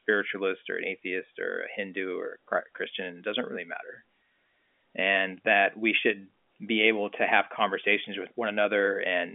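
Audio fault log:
No faults are present in this speech recording. The G.711 telephone coding path is audible as a narrow line band from 250 Hz to 3.4 kHz, with nothing reaching above 3.6 kHz.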